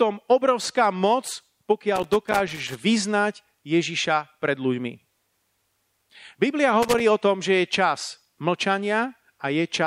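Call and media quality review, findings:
Loose connector crackle at 1.96–2.75 s and 6.82–7.0 s, just before "o tom". Worn or dirty contact making and breaking, chopping the speech into irregular scratchy bursts. Waveform: ragged dropouts and spikes. Spectrogram: scattered broadband vertical streaks. Probable component: cable or jack.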